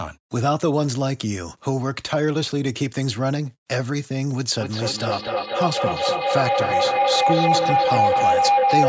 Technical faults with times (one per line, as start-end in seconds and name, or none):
4.60-8.89 feedback howl